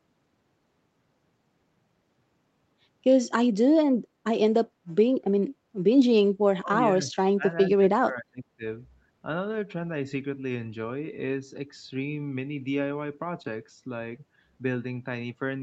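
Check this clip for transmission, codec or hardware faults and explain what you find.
One fault kind recurs in this speech clip: speech suppressed in double talk, in three bursts at 6.59 to 6.78 s, 6.94 to 7.48 s and 7.70 to 8.64 s. Within each, the talker's level dips by up to about 25 dB. The likely cause is an echo canceller that, with both ends talking at once, could not tell near speech from loudspeaker echo and attenuated everything. The audio tops out at 8 kHz, as expected from the call's codec path.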